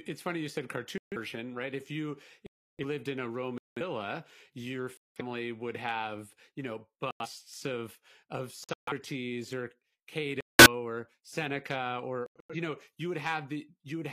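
The speech drops out in eight places, from 0.98 to 1.17 s, 2.47 to 2.85 s, 3.58 to 3.81 s, 4.97 to 5.22 s, 7.11 to 7.27 s, 8.64 to 8.92 s, 10.41 to 10.67 s and 12.26 to 12.55 s. Each is a corrupt frame muted. Damaged compressed frames were rejected by the decoder. Silence was put in their place. Every hole starts abruptly. Each spans a few whole frames. The timing around the holes holds steady.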